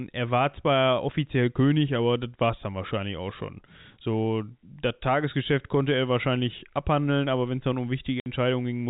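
At 8.2 to 8.26 s, right after "wenn es dann um", packet loss filled with silence cuts a 60 ms hole with hard edges, which fits three 20 ms packets. It shows as a flat gap in the waveform and a blank column on the spectrogram, under the 4 kHz ceiling of the G.711 telephone band.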